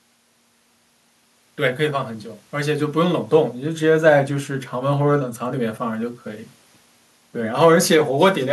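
No technical faults are audible anywhere in this recording.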